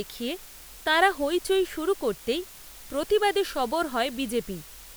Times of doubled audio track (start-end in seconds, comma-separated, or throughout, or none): none